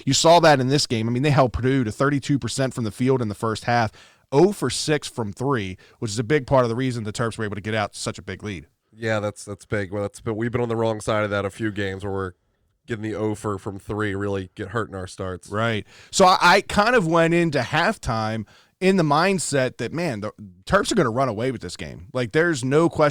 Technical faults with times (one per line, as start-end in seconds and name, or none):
0.00-23.11 hard clipping